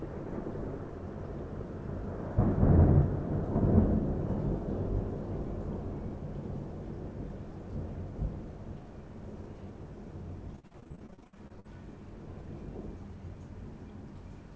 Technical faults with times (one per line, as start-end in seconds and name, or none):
10.56-11.66 repeated packet loss (robotic sound)